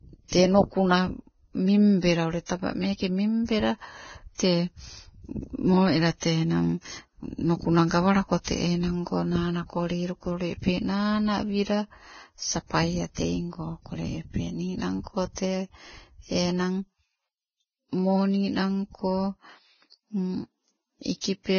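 Throughout the speech, everything above 6.5 kHz is gone, leaving an empty band on a spectrogram, and the remaining treble sounds hissy and grainy, with blurred consonant attacks. This is likely heavy Vorbis compression near 17 kbps, coarsely quantising treble detail into noise.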